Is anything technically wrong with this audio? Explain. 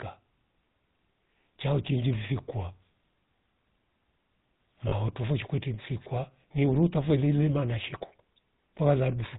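Yes. The speech runs through the GSM full-rate codec for the whole clip. Its tight bandwidth and roughness fit the 13 kbps full-rate scheme, which models the vocal tract and excites it with sparse regular pulses. The damage is plainly audible: nothing above 4 kHz, and a buzzy, gravelly texture throughout.

From 4.88 to 4.93 s there are lost GSM frames. This gap of about 40 ms fits two 20 ms frames. The decoder fills it by repeating the last good frame's parameters, so the sound briefly freezes into a rough, metallic ring before normal decoding resumes.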